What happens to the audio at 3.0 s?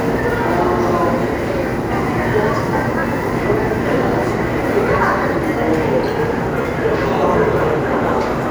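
A Bluetooth stutter hits from 3.00 to 3.03 s. Incoming data went missing, so the receiver replayed its last buffered slice to fill roughly 29 ms, which fits a couple of lost packets. It comes across as a brief repeated buzz before the sound picks up further on.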